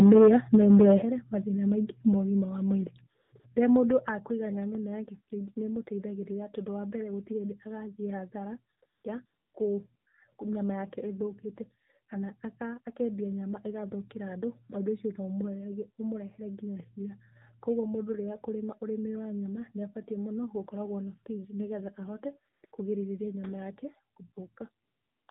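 From the first instant to 0.95 s the loudest syllables carry a harsh, crackling edge. The peaks run about 5 dB past the converter's limit, so roughly a tenth of the waveform has its tops flattened. That is microphone overload, with input gain likely set too high. Because the fault is squared-off peaks and not smeared, swirling distortion, it is plainly clipping before the codec rather than a codec artefact.

Three sudden level drops follow: about 2 dB at 0.02 s, about 8 dB at 1.02 s, and about 6 dB at 4.08 s. Voice and background fall together in a single step each time. This is microphone volume stepped down, likely the pattern of call software lowering the device's input gain once it sees the level running too hot. A fade or a compressor would glide down and recover. These drops are instant and never come back up, and the largest one lands right after the clipped opening.

Throughout, the speech is confined below 4 kHz and sounds buzzy and synthetic. 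Sibilants are dulled, and the background warbles. That is the AMR narrowband mobile codec, and the plainly audible damage fits a low mode around 7.4 kbps. Plain band-limiting would only sound muffled. The buzzy excitation and warbling noise point to the codec's vocal-tract model being starved of bits.

Nine short pauses are filled with AMR comfort noise, in clusters around 3.2 to 3.4 s, 8.8 to 10.1 s and 22.5 to 22.7 s, plus a final 0.44 s stretch from 24.84 to 25.28 s. Each lasts 40 to 440 ms. In these gaps the real background gives way to smooth, steady hiss that switches in and out. A dropout would fall to silence, but here the phone stopped sending speech frames and the receiver synthesised a stand-in noise.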